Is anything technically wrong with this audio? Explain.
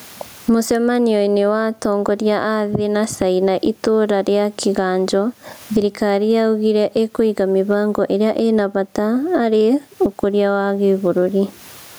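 Yes, there's gain pumping running through the whole clip. The gain swings by around 20 dB, so the speech sounds squashed, loud and soft parts sitting oddly close together. The likely cause is microphone gain set far too high with a fast limiter or compressor clamping down on every peak. The room noise itself sits about 45 dB below the speech; it's just ordinary background in the room, not a fault.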